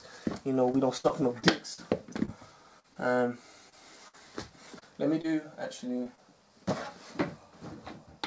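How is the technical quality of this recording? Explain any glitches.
The recording has packet-loss damage in several places, and the audio is band-limited by the call codec. It has nothing above 8 kHz, which fits G.722 at 64 kbps.

From 0.72 to 2.97 s there is repeated packet loss (robotic sound). Eight gaps fall close together, the longest 67 ms. The receiver patched each hole by extending the previous sound, filling about 10% of the stretch. The result is choppy and robotic, with small pieces missing. On a spectrogram the harmonics look frozen or smeared in short repeated patches. The waveform shows an envelope that stutters rather than flowing.

Short concealed packet loss happens at 3.69 to 3.74 s, 4.79 to 4.83 s, 5.21 to 5.26 s, 6.04 to 6.07 s and 6.15 to 6.19 s. Each time, about 20 ms of audio never arrived. The decoder bridged the hole with a continuation of the last sound, built from its pitch if it was voiced and from shaped noise if not, then blended back in. 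Each one is heard as a brief smear or wobble. A spectrogram shows a thin band where the spectral detail holds still instead of changing.

A burst of packet loss runs from 4.08 to 4.15 s. About 60 ms of audio is gone, covered by a 52 ms fill. The receiver continued the last sound and faded it, so the gap is either a held buzz or a dying hiss, depending on what came before. The audio then resumes slightly further on. On a waveform the envelope decays through the gap and then jumps back to full level. On a spectrogram the pattern goes static and dims before the normal texture returns.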